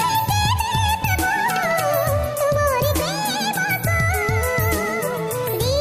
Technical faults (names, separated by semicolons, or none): wrong sample rate